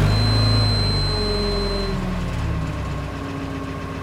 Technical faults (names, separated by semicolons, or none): feedback whistle